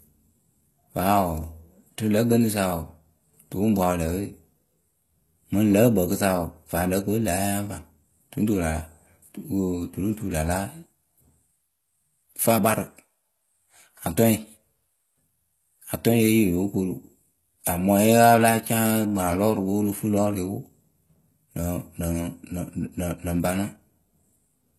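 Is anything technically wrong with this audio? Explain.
Yes. Low-bitrate audio saved at a high bitrate runs throughout the speech: nothing is present above 12.3 kHz, and the remaining artefacts fit a likely very low-bitrate first encode, perhaps around 16 kbit/s, later re-saved as a high-bitrate MP3 that cannot restore the lost detail.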